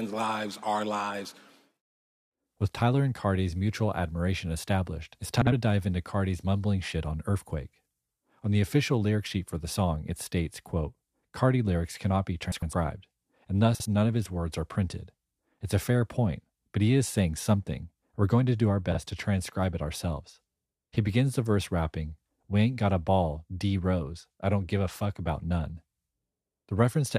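There are frames out of order at 5.41–5.52, 12.52–12.73, 13.75–13.86 and 18.92–18.97 s. Each time, two adjacent chunks (about 52, 104, 52 and 26 ms) play swapped, giving a quick garbled flutter. No time goes missing.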